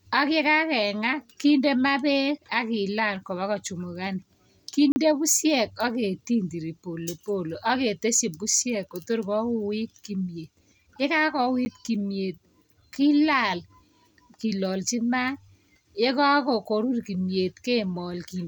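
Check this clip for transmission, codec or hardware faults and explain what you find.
Two faults, both blocks of digital silence. At 4.92 to 4.96 s and at 11.65 s, just before "kimyet kilal", the output buffer likely went unfilled, so the audio cut out. The 40 ms gap is a short hole; the 10 ms one is a tick.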